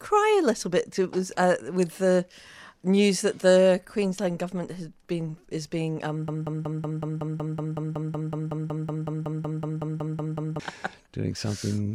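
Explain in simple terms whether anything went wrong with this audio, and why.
At 6.28 seconds the sound gets stuck in a broken-record loop. A tiny piece, about 0.19 seconds long, repeats 23 times until 10.6 seconds. The player or stream likely stalled and kept replaying it. The sound meant for that stretch is lost.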